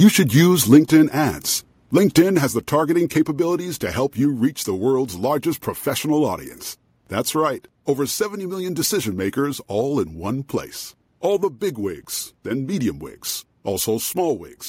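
Brief harsh crackle at 0.04–0.08, 0.37–0.40 and 0.72–0.77 s, likely microphone overload pushing peaks about 1–2 dB past the converter's limit; the waveform shows flattened tops. At 0.77 s and again at 2.37 s, sound and background drop suddenly, by about 2 dB then about 4 dB, likely the microphone volume stepped down by the call software; the waveform envelope steps lower.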